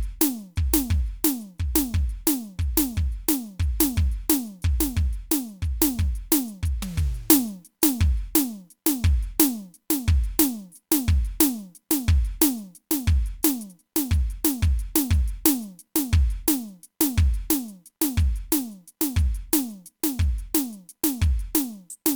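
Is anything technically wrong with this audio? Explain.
No, nothing is technically wrong with this music.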